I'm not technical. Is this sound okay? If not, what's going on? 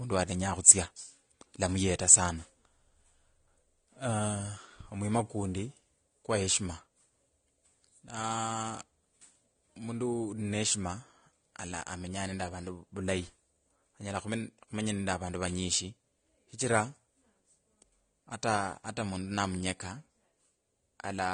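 No. Throughout the speech the sound is dull, with nothing above about 9.7 kHz and smeared, layered artefacts, likely from transcoding between lossy codecs, compressed twice in a row.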